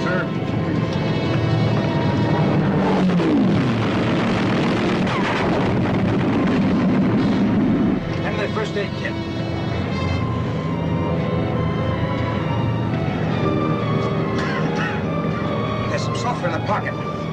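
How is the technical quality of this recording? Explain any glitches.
The technical quality of this recording is good, with no glitches to explain.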